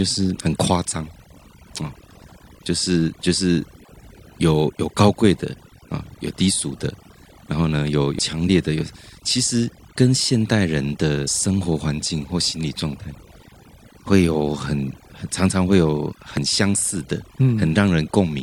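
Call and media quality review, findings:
Overdone noise removal throughout: denoiser set too strong, suppressing frequency bands judged near its noise estimate, and quiet speech components with them. Background drops and breaks up into twinkling specks.

Damaged data in a compressed stream at 0.35, 8.18, 11.26 and 16.37 s: corrupt bytes make the decoder misread frames, lose sync and hunt for the next header. Each heard as a brief chirp, click or short hole.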